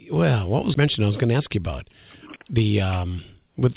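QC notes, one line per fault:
0.74–0.76 s, skip ahead: playback jumps straight forward by roughly 0.7 s with no gap or fill. Later audio was already queued, so a stretch was dropped and the two sides spliced almost directly, cutting the speech abruptly.
0.84–1.93 s and 2.37–3.18 s, jitter buffer speed-up: the speech runs about 14% and then 12% faster at unchanged pitch and sounds hurried. The receiver repeatedly removed short pitch-period pieces, about 150 ms and then 100 ms, to shrink an overfull buffer, all within the narrow G.711 call band that stops at 4 kHz.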